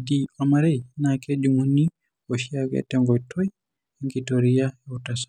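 Nothing in this speech clip stands out as a technical fault, so there's nothing here to flag.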